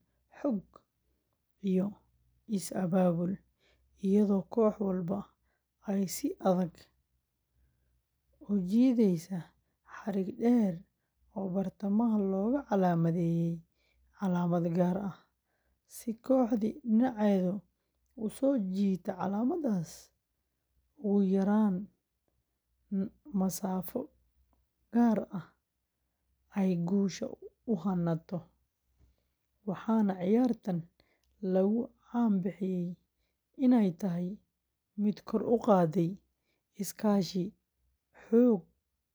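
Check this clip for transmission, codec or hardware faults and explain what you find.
No faults can be heard.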